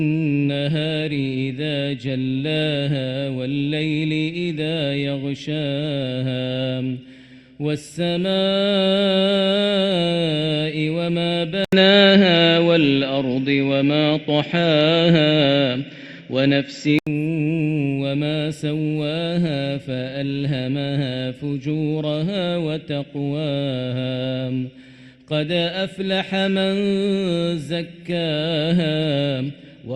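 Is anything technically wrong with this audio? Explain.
Yes, there is one fault. From 11.6 to 17.1 s the input likely switched to a poorer device whose narrower band leaves nothing above 7.6 kHz. An 80 ms flat gap in the waveform comes first, then duller sound with an empty upper spectrogram band.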